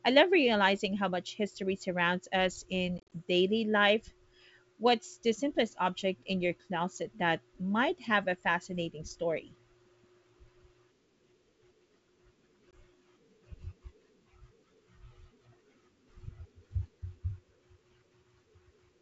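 Between "history surrounds us in" and "daily life", from 2.98 to 3.12 s, packet loss on an ADPCM call punches hard-edged silent holes into the G.722 stream: 100 ms lost in bursts up to 40 ms, again briefly at 12.71 to 12.73 s. Unlike plain dropouts, the desynchronised predictor makes sound resume slightly distorted.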